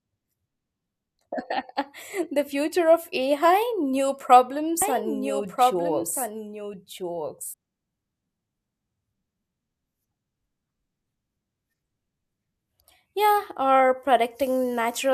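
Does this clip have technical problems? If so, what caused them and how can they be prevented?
Yes. From 4.82 to 7.54 s a doubled audio track appears: a dry, full-band copy of the speech trails about a second and a half behind, roughly 5 dB quieter, starting and stopping abruptly. On a spectrogram the same patterns repeat, time-shifted and fainter. It was likely caused by a second, slower capture path or misaligned edit copies. Prevent it by routing each source once and muting duplicate inputs or tracks.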